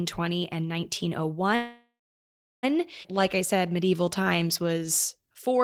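A speech clip with a call audio freeze from 1.55 to 2.65 s: the last sound is stretched into a fading buzz and then about 0.7 s of silence, likely because packets were held up and the jitter buffer ran empty. Speech resumes exactly where it stopped, so roughly 1.1 s is inserted and nothing is lost. At 3.03 s a skip ahead does the reverse, cutting roughly 0.7 s of speech and joining the two sides almost directly with little or no gap. From 3.15 to 5.58 s a jitter buffer slow-down plays the speech at 92% speed, adding 192 ms through repeated pitch periods. Sounds become drawn out, but the pitch holds and nothing stops or disappears.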